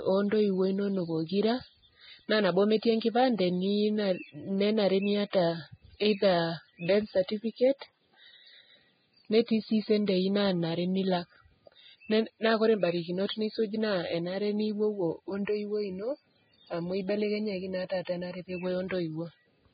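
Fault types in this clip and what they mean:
Vorbis compression: The whole recording sounds hissy and grainy, with nothing at all above about 4.9 kHz, so the top end is just gone. That's likely from squeezing it through Vorbis at a very low rate, around 15 kbps judging by the damage. At that setting the encoder drops the highs and crushes the remaining treble detail into noise-like fuzz, which is why consonants smear and the speech tone sounds rough.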